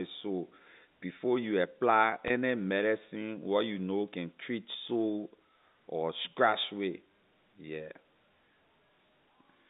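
At 2.28 to 2.30 s, between "sore before you apply" and "medicine where you know", packet loss with pitch repetition fills a 20 ms gap, about one packet's worth. The last pitch period repeats briefly, giving a faint held buzz over the band-limited G.711 telephone sound.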